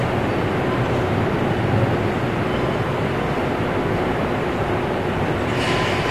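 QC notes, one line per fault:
Throughout, AAC compression: the top end stops dead at about 13.5 kHz, and the whole clip sounds dull and smeared, with a warbly, fizzy grain on anything sustained or hissy. That's the likely signature of AAC-LC run at a low bitrate, something like 32 kbps, where the encoder runs short of bits, drops the high band and thins or noise-fills the rest. The damage is plainly audible, not subtle.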